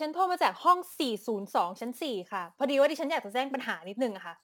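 From start to end, crude rate conversion leaves a gritty, inharmonic fizz trailing louder, brighter syllables, roughly 25 dB under the speech. Samples were repeated instead of filtered, consistent with a 44.1 to 48 kHz step. A spectrogram shows faint stray tones off the voice's harmonics.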